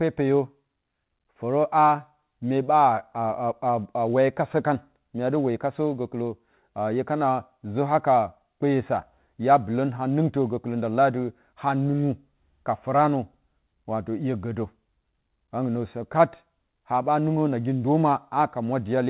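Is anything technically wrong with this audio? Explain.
No, nothing is technically wrong with this speech clip. It has gone through a call path whose coding fits G.711 mu-law at 64 kbps, so there is nothing above 4 kHz and the sound has the narrow, telephone-band quality that codec always gives.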